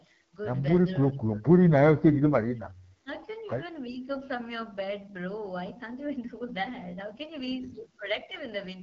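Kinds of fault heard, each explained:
AMR wideband (HD Voice) codec: speech sounds rough and raspy, fitting a low rate near 8.85 kbit/s. The spectrogram shows noise-like upper band and nothing above 7.6 kHz.
Speech suppressed in double talk: speech dips by up to about 30 dB in patches between 1.1 and 4.07 s, likely echo-canceller ducking, seen as sudden hollows in the waveform envelope.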